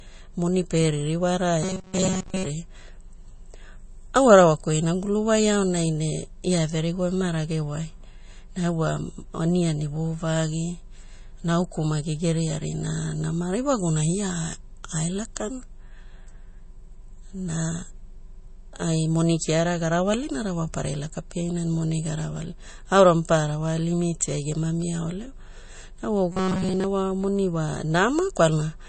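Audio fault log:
Throughout: MP3 compression, plainly audible as watery, swirling speech with nothing above 8.3 kHz, which fits a likely low bitrate near 32 kbps starving the encoder.
1.63–2.46 s and 26.32–26.84 s: robotic sound from repeated short buffers, a rigid metallic buzz near 188 Hz, after "moni pie ririwara" and before "wa moni", likely from about 5.3 ms fragments repeated over most of each stretch.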